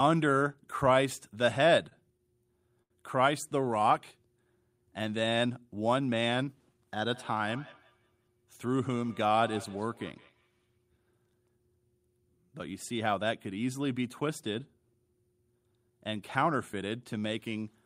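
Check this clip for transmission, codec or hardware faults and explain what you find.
There are three kinds of fault here, all on the network and call side rather than in the codec.

Two short stalls from a late packet, at 1.89 to 1.93 s and 2.82 to 2.92 s. The jitter buffer ran dry, so the receiver stretched the last bit of sound for about 18 ms and then 77 ms until the packet showed up. Nothing's lost, but you hear a held hang, especially the second one.

Feedback echo between two devices, from 7.10 to 10.68 s. A second device in the room is replaying the call into another's microphone, and neither echo canceller catches the other's output. The speech comes back roughly every 150 ms, peaking about 21 dB below the direct sound, thin and ringing.

Two jitter buffer speed-ups, at 8.66 to 9.33 s and 16.37 to 16.83 s. After a backlog built up, the receiver trimmed out tiny pitch-period slices, about 70 ms then 40 ms in total. 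That pushes playback to 109% and 107% speed with pitch unchanged, so those stretches sound a bit rushed.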